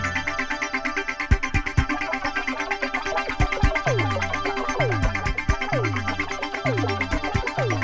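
Nothing stood out on listening to this clip.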